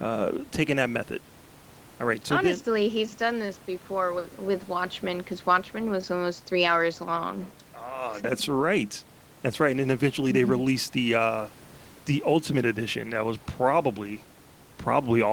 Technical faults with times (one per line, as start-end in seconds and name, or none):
none